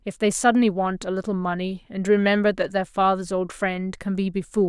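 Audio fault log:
No technical fault is detectable anywhere in the speech; the signal stays intact and continuous across its whole span.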